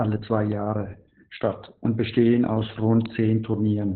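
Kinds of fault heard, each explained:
Opus voice compression: muffled, hoarse, slightly robotic speech with nothing above about 4.2 kHz, from low-rate SILK coding, which fits roughly 8 kbps narrowband.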